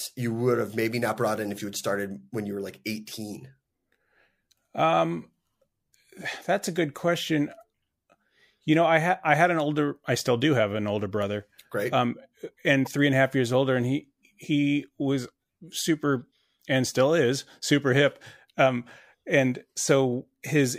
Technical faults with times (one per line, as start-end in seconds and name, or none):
12.85-12.87 corrupt frame decoded